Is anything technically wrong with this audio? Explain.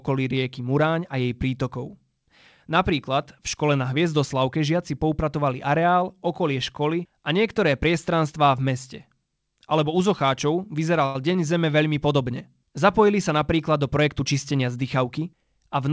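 Yes, there are two faults in this speech clip, both arising in the jitter buffer of a call path whose G.722 coding leaves nothing above 8 kHz.

From 11.06 to 11.16 s the sound briefly hangs: one sound is held on for about 88 ms with a faint buzzy, flattened quality before the speech carries on. This is a short stall from a late packet. The packet was not there when due, the buffer ran dry, and the receiver stretched the last audio to fill the gap. Nothing was skipped; the packet resumed from where it left off, and the delay grew by the same 88 ms.

Right after "sa napríklad do", from 13.99 to 15.27 s, the speech sounds slightly rushed, running at about 108% speed while its pitch stays the same. This is a jitter buffer speed-up. The buffer was holding more audio than its target, so the receiver repeatedly cut out tiny slices of one or a few pitch periods. In total it removed roughly a tenth of a second to bring the delay back down.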